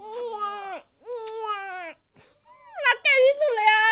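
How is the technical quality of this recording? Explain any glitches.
No audible glitches or faults.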